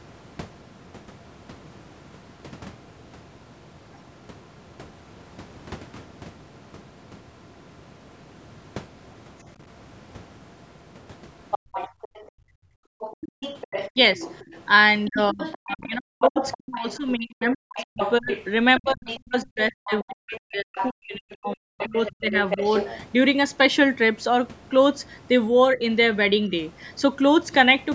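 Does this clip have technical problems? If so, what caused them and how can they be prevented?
Yes. The clip has three kinds of fault.

The other side's voice leaking through can be heard from 11.51 to 12.28 s, from 13.0 to 16.8 s and from 17.5 to 22.99 s. A second voice sits roughly 10 dB under the talker. The likely cause is loudspeaker playback reaching the microphone that the echo canceller failed to subtract fully. On a spectrogram this shows as a fainter, separate set of harmonic bands overlapping the main speech, and it stops below the 8 kHz ceiling of the call band. Using a headset, or lowering the loudspeaker volume and keeping it away from the microphone, prevents this.

The background is gated by the echo canceller from 11.59 to 13.0 s, for about a second in total. While the loudspeaker was active, the canceller clamped the microphone and pulled the room sound down by about 37 dB at its deepest before releasing it. 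The waveform shows the noise floor collapsing to near-flat and then stepping back up, and the spectrogram shows the room sound darkening sharply before it returns. Reducing loudspeaker-to-microphone coupling, or choosing a gentler suppression setting, prevents this.

Speech is suppressed in double talk at 13.4 to 14.2 s, at 15.09 to 22.34 s and at 25.74 to 25.83 s. The talker's voice dips or breaks into pieces, most severely in the long middle stretch, where roughly 5 seconds are affected with drops near 40 dB. The likely cause is the canceller mistaking the talker for echo while both sides spoke and attenuating everything. The waveform shows chopped, hollowed speech envelopes, and the spectrogram shows upper harmonics vanishing in patches. A headset, or a canceller with better double-talk detection, prevents this.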